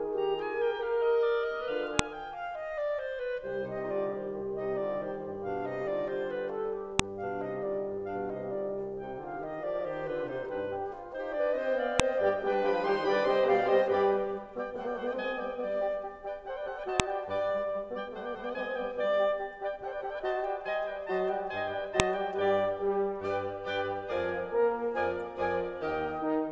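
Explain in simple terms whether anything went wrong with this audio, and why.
Sharp clicks snap through the music at 1.99, 6.99, 12.00, 17.00 and 22.00 s: a file header played as audio, where each 5 s piece's header bytes were played as sound.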